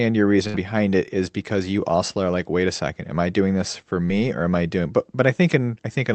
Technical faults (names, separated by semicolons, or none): burst of packet loss